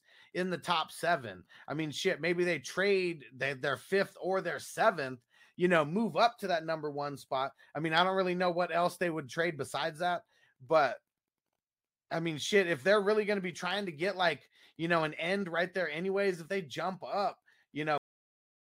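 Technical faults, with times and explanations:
17.98 s to end, cut-off end: just after "if they jump up" the speech stops mid-sound into dead digital silence, because the final buffers were never written.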